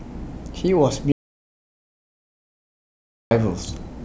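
At 1.12 s the speech cuts out abruptly. An audio dropout to silence runs until 3.31 s. For 2.19 s there is only silence, with no room tone. The input was likely lost while recording continued. Speech resumes mid-flow.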